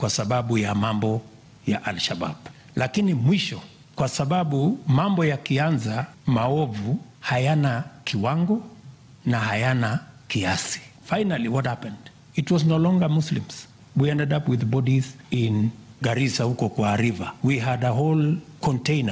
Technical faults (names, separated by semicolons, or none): gain pumping